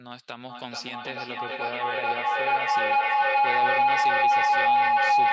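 From 0.49 s to the end, feedback howl builds as each loop trip adds level: a tone near 700 Hz, the loop repeating about every 0.4 s, peaking about 15 dB over speech, drawn as a bright spectrogram line.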